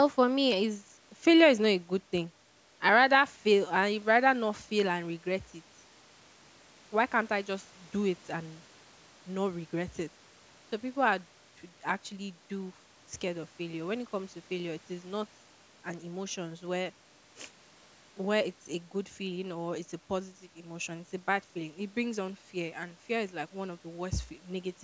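Nothing stood out on listening to this speech; the band tops out at 8 kHz and the lowest bass is trimmed, as expected from a call's microphone processing.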